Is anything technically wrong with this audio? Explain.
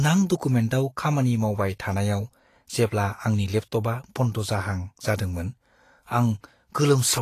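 Yes. Throughout the speech the treble sounds hissy and grainy, tones are roughened, and nothing is present above 14.2 kHz. This is likely Vorbis compression at a low setting, consistent with roughly 36 kbps, where fine high-frequency detail is quantised into noise.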